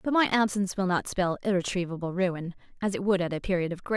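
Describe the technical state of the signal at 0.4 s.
At 0.4 s the speech signal is intact, with no audible fault at that moment.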